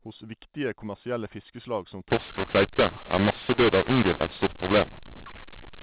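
From 2.10 s to the end, the G.711 telephone speech turns harsh: mu-law samples are decoded as A-law, scrambling levels so speech distorts and pauses fill with hiss. The waveform shows jagged amplitudes and raised silence; the spectrogram fills gaps with broadband noise below 4 kHz.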